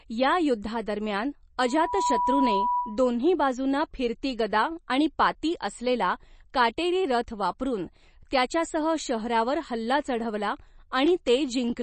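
Throughout the speech there is a hard ceiling with nothing above 8.3 kHz, and the remaining treble sounds watery and swirly. This is likely MP3 compression at a low bitrate, which fits about 32 kbps. On a spectrogram the top edge is flat and the upper bands are speckled where weak components switch on and off between frames.

From 1.62 s to 3.05 s, just before "बाजूंना फिरती गदा", a loudspeaker feedback squeal appears. The microphone re-amplifies its own loudspeaker at 981 Hz, and that tone swells into a howl over a few tenths of a second until it is roughly as loud as the speech. A spectrogram shows a single bright horizontal line there, and the waveform envelope visibly fattens.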